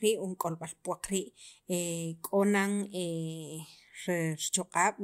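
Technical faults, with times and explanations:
No technical faults can be heard anywhere in this speech recording. There is nothing to list by time.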